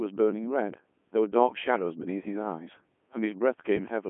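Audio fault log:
Throughout, Codec 2 vocoder: the speech sounds heavily robotic and buzzy, since the decoder rebuilds it from sine waves using just pitch, voicing, energy and envelope, so the real waveform is lost. It's band-limited to 200 Hz–3.4 kHz, nothing above 3.8 kHz, which fits the 3.2 kbit/s mode.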